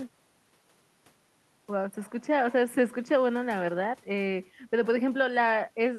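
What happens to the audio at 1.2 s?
Nothing goes wrong at 1.2 s: the speech carries on intact through that moment, with no dropout, click, distortion or other fault to be heard.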